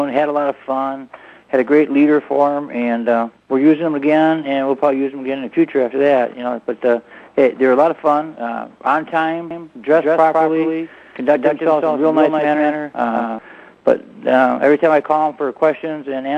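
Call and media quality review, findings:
Doubled audio track, 9.51 to 13.39 s: second full-band copy about 150 ms behind, about 5 dB quieter, starting and stopping abruptly. Likely a slower parallel capture path or misaligned edit. Unlike echo or reverb, there is no decay tail or room colour.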